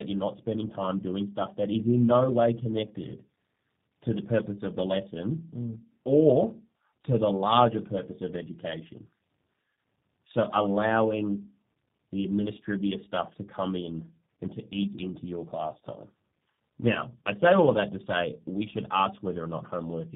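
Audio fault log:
Throughout: tandem speech coding. The speech passed through G.729A at 8 kbit/s, then G.711 A-law, then G.729A again. The second low-rate coder re-encodes the first one's errors. Speech sounds rough, muffled and warbly, with nothing above 3.7 kHz.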